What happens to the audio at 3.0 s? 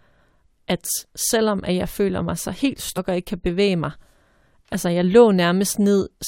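Damaged data in the compressed stream hits at about 2.96 s, between "føler mig så helt" and "og ikke kan bevæge". Corrupted bytes leave the decoder unable to read the frame there. It drops sync and hunts forward for the next valid frame header before normal decoding resumes. What you hear is a brief blip, under 20 ms long, that cuts across the speech at that point.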